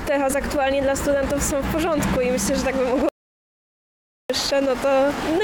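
At 3.09 s the sound cuts out abruptly and stays in dead digital silence until 4.30 s, about 1.2 s with no room tone at all. That's an audio dropout to silence, likely a lost input where the recorder kept writing zeros, so that stretch is simply gone.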